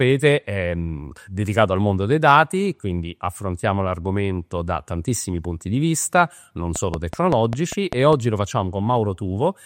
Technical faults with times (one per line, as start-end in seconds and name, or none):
6.76-8.14 train of clicks